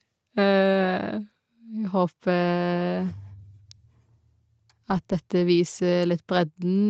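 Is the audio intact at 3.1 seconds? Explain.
Yes, at 3.1 seconds the speech is intact, with no dropout, glitch or distortion; it carries only the normal 8 kHz band limit of the call path.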